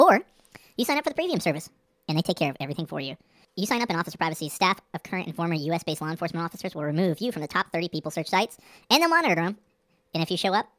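Speech clip with a wrong sample rate throughout: everything runs about 1.45 times fast and sits roughly 6.5 semitones high, fitting audio made at 22 kHz played at 32 kHz. Unlike a pitch shift or time-stretch, tempo and pitch rise together.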